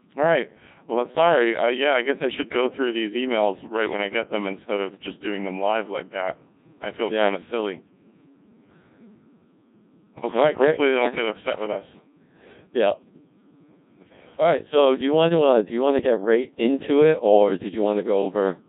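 Codec 2 vocoder damage runs through the whole speech clip, from start to finish. The speech has been reduced to a few parameters: pitch, voicing decisions, energy and a coarse spectral envelope. It was then rebuilt from summed sine waves, so the original waveform is gone. The result is heavily robotic and buzzy, with a smeared, synthetic timbre, and the degree of damage fits a very low rate of around 1.6 kbit/s.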